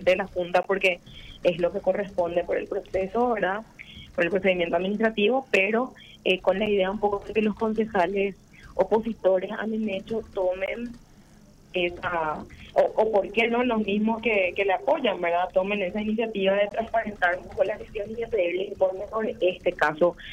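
At 0.63, 6.66, 10.66 and 16.69 s, a gap between stream segments cuts the sound with hard-edged silences of about 16, 9, 18 and 20 ms. Each falls on a 2-second segment boundary where the timestamps fail to meet, so the player inserts silence without losing any audio.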